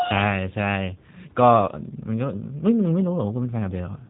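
G.729 codec damage runs throughout: speech rebuilt from a vocal tract model and sparse pulses sounds rough and synthetic, with nothing above 3.8 kHz, which fits 8 kbit/s coding.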